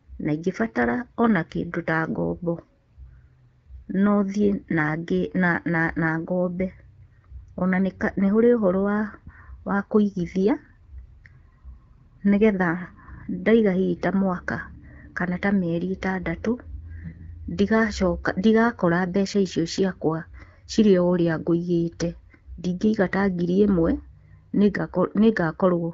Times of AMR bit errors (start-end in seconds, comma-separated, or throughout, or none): 17.04-17.28